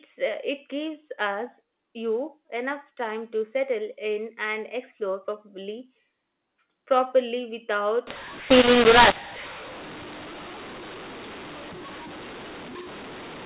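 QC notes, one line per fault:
8.07–13.45 s, mu-law and A-law mixed up: from here to the end, A-law coded telephone audio is decoded as mu-law. The mismatched logarithmic curves scramble sample levels, so the speech turns harsh and distorted, and pauses fill with hiss.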